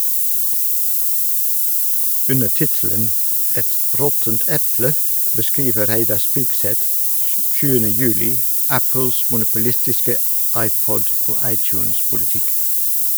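Speech recorded with low bit depth with noise shaping running through the whole clip. At what sounds like only 4 bits, the rounding error has been pushed upward in frequency, giving a thin, steady hiss that grows brighter toward the top and sits roughly 10 dB relative to the speech level. A spectrogram would show a dense noise floor rising steeply into the upper kilohertz range. A zoomed waveform would show coarse, stepped amplitude levels.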